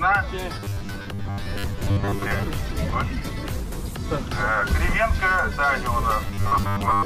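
Robotic sound from repeated short buffers appears from 0.56 to 2.47 s and again from 6.22 s to the end, a rigid metallic buzz at 100 Hz. Audio likely arrived too seldom, so roughly 10 ms slices were replayed in place of about half the sound, and later most of it.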